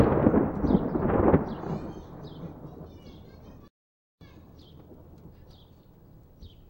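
At 3.68 s the sound cuts out in mid-flow and stays silent for about 0.53 s, resuming at 4.21 s. That gap is a playback stall. The player most likely ran dry of data or had its thread blocked, so the output simply went quiet until it caught up.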